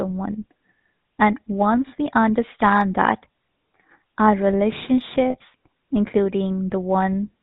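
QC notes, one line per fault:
throughout, GSM full-rate codec: plainly buzzy, gravelly speech with nothing above 4 kHz, from pulse-driven vocal-tract modelling, which fits 13 kbps GSM full rate.
5.30–5.37 s, lost GSM frames: a brief rough, metallic ring where the last good frame's settings were repeated, about 40 ms, consistent with two missing frames.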